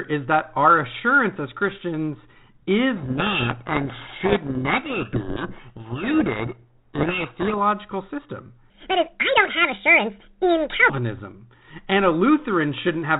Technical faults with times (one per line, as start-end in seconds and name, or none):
2.96-7.54 codec payload misread
8.70-10.90 section at the wrong speed